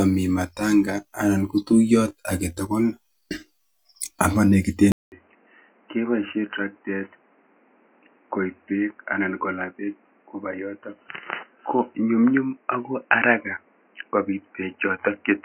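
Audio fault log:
4.92–15.45 s, input switched to a poorer device: After a 200 ms silence, the sound turns dull and boxy, with nothing above 3 kHz. The level falls by roughly 10 dB. A new, faint noise floor appears. Another microphone or headset profile likely took over.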